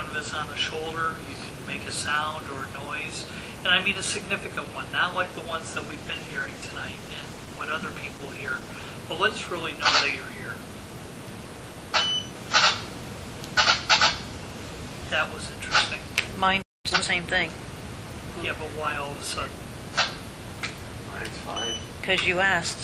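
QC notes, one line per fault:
5.75–9.01 s, call bitrate drop: sound turns coarse and muffled with the top end gone, which fits the encoder being cut from 48 to 16 kbps.
16.62–16.86 s, playback stall: output goes silent mid-flow for about 0.22 s, likely because the player ran out of data or its thread was blocked.
16.86–17.06 s, time-compressed catch-up: audio runs at 2x speed at normal pitch, as small pieces are cut and cross-faded to clear the backlog.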